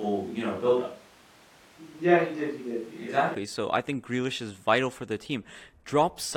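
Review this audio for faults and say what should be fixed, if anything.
From the start until 3.35 s the speech sounds roomy and hollow, thin in the bass, with room noise sitting about 30 dB below it. At 3.35 s it snaps to a close, full sound at much the same level. That abrupt change points to a switch to a distant microphone, likely because the close mic's feed dropped out. Added reverb or a low-cut filter would not shift the tone and room pickup together at one instant. Monitor and record the close mic on its own track, with a backup, so a failed feed is caught during recording.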